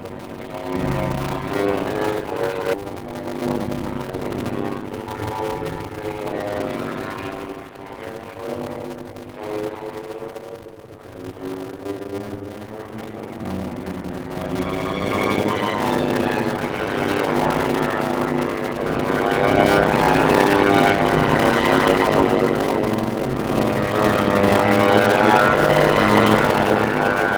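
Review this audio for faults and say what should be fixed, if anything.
A steady buzz at 100 Hz runs through the whole clip, and everything plays at about 53% of normal speed while the pitch stays about right. This is a block size mismatch (padded). Each 100 Hz block carries only part-block of real audio, and the rest is filled with silence. The speed ratio fits a writer delivering 256 samples into blocks of about 480, which points to a 48 kHz stream. Those repeated zero gaps create the buzz and stretch the timing. To prevent it, make the writing and reading stages agree on block size, or put a FIFO between them that waits for a full block before it is read.

At 2.73 to 2.75 s the sound jumps forward with no gap, and roughly a second and a half of audio is gone. The two sides are joined almost directly. This is a skip ahead: the jitter buffer had grown too full and dropped the stretch that was already queued, which cut the latency by about the same amount at once. 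To prevent it, size the jitter buffer for the real network jitter and shrink it gradually instead of discarding a large stretch at once.

From 2.83 to 5.31 s the sound is hurried, running at about 113% speed with unchanged pitch. This is a jitter buffer speed-up. After the backlog built, the receiver removed many short pitch-period pieces in a row, about a third of a second in total, to bring the delay down toward its target. To prevent it, smooth packet arrival upstream and limit how fast the buffer can time-compress, so catch-up is spread over a longer span.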